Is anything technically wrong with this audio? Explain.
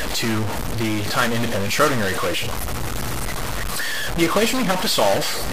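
Yes. A stuck bit runs through the whole clip, likely from one data bit held at a fixed value. Samples where that bit should differ are off by its weight, a step around -20 dBFS, in a pattern that follows the waveform. The result is harsh, buzzy distortion. Because small values flip sign, even quiet gaps fill with loud noise. A waveform view shows abrupt offset steps, and a spectrogram shows broadband smear throughout, including the pauses.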